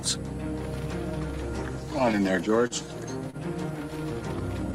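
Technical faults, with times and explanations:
2.67 to 2.73 s and 3.30 to 3.37 s, short stall from a late packet: Each time a packet missed its playout slot, the jitter buffer ran dry and the receiver filled the gap by stretching the sound it already had, for 33 ms and then 31 ms. Playback then resumed from the same point, so nothing is lost. Instead a sound hangs slightly too long with a faint buzz or dip, and the overall delay grows by the filled time.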